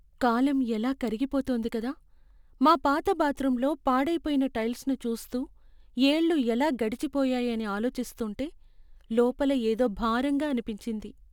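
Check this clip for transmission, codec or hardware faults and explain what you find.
One hardware fault runs through the whole speech clip: sample clock jitter. The converter's clock wanders by a few microseconds, so each sample is taken slightly off time. Steep, loud passages pick up a hissy roughness roughly 35 dB below the signal, disappearing in pauses.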